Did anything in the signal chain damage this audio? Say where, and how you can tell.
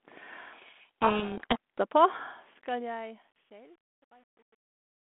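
Yes. At the codec stage, a codec payload misread from 0.52 to 1.57 s buries the speech in harsh distortion, consistent with G.726 code words decoded in the wrong bit order.

In the fade stage, truncation distortion on the fade-out appears from 2.05 s. It is grittiest from 2.71 to 5.12 s, fitting an undithered 9-bit word length.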